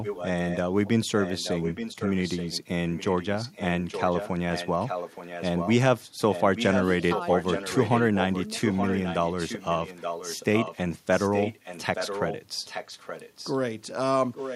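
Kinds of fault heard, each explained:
Echo leak: there's a second copy of the speech trailing the original by about 0.87 s, running in stretches from 0.02 to 5.74 s, 6.3 to 10.77 s, 11.12 to 13.58 s and from 14.33 s to the end. It sits roughly 10 dB under the direct speech, coming up to around 5 dB under in the middle stretch. This is likely a loudspeaker at the other end whose echo canceller let the played-back call slip into its microphone and back down the line.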